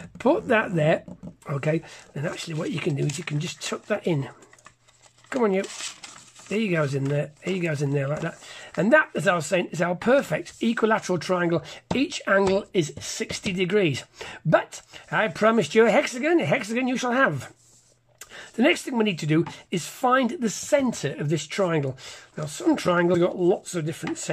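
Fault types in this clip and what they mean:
Compressed frames skipped: at 23.13 s, whole blocks of the encoded stream are never decoded, either lost from the file or rejected as corrupt. Playback jumps forward by around 70 ms, which fits roughly three frames of 26.1 ms each. At the seam the sound abruptly advances.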